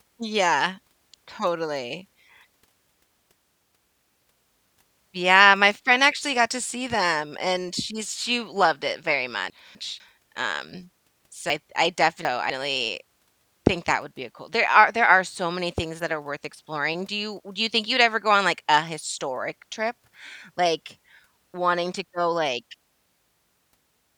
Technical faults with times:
9.50-10.00 chunks out of order
11.50-12.50 chunks out of order

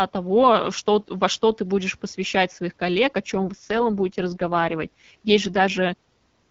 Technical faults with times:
3.34-5.83 AMR rate drop

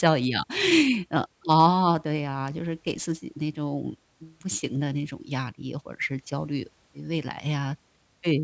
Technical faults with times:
0.00-8.44 aliasing

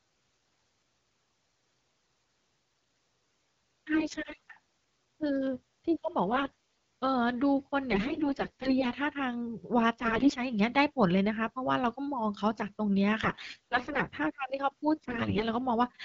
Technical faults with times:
3.93-4.38 AMR bit errors
6.32-6.51 AMR bit errors
7.92-8.93 AMR bit errors
9.99-10.37 AMR bit errors
13.23-14.07 AMR bit errors
14.98-15.44 AMR bit errors

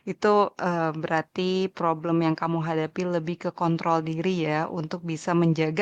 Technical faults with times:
none

